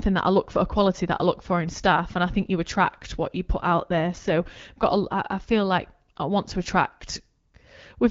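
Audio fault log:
3.56 to 5.06 s, AMR rate drop: the speech turns rougher and more synthetic, with no gap and no loss of bandwidth, then clears again. The network cut the AMR-WB coding rate to shift bits into error protection, which fits a step from 12.65 down to 8.85 kbit/s.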